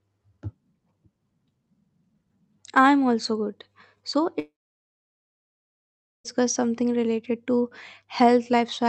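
From 4.39 s to 6.26 s the speech cuts out for about 1.86 s, likely a long network dropout. The last sound trails off as a brief fading buzz, then roughly 1.73 s of silence follows before speech resumes with that stretch missing.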